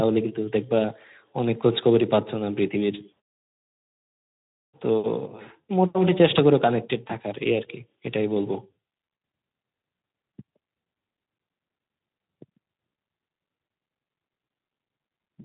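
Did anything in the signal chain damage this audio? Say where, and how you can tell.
Yes. At the network stage, VoIP packet loss concealed by the speech codec hits 7.07 to 7.11 s. One 20 ms frame was lost, and the Speex decoder extrapolated its last pitch and filter at falling gain. The result is a brief smear that lingers past the gap, unlike the hard click or silence of a buffer underrun.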